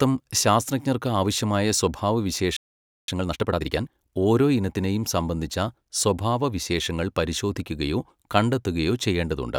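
At 2.57 s the speech cuts out mid-flow. Silence holds for about 0.52 s, until 3.08 s. This is a playback stall. The player likely ran short of data or its thread was blocked. Output resumes where it stopped.

From 3.08 to 4.10 s comes time-compressed catch-up. The player trims its backlog by cutting small slices and cross-fading the joins. Speech runs about 1.5 times fast at normal pitch. Normal pace returns before "ഓരോ ഇനത്തിനെയും സംബന്ധിച്ച സ്വഭാവവിശേഷങ്ങൾ".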